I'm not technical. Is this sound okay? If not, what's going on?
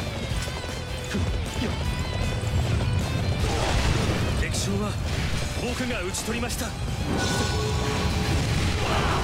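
Yes, nothing stood out as a problem when listening to this sound.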